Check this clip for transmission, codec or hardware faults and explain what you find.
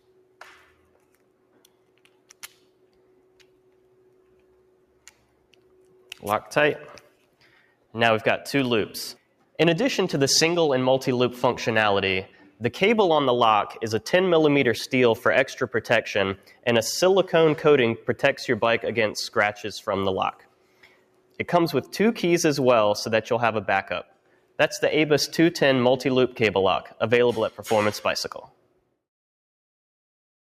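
A speech-oriented noise suppressor is processing non-speech sound, and it produces two audible faults.

Noise suppressor applied to music or sounds, throughout: the suppressor was designed for speech, so it classes steady tones, ambience and decaying tails as noise and keeps pulling them down. Its gain wanders by roughly 5 dB as it re-decides what counts as noise. Onsets get through, but held portions sag, so the sound pumps and thins rather than sitting at a steady level.

Sound cut by the noise suppressor occurs at 0.01–6.18 s, 7.0–7.83 s, 12.28–12.61 s, 16.37–16.66 s, 20.32–21.41 s, 24.04–24.59 s and 28.46–28.79 s. In each span the suppressor judged the sound itself to be noise and cut it much harder than its baseline, by about 12 dB at the deepest (about 11 dB around 7 s). The opening stretch is the longest, with most of its first six seconds dipped. Later events are brief, a fraction of a second up to about a second. 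Sustained or fading material drops away and tails end early, while sharp attacks keep most of their level.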